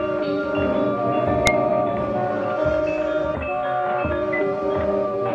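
A music clip with one sharp, loud click at about 1.47 s. This is a file header played as audio: header bytes left in where pieces were joined, heard as samples.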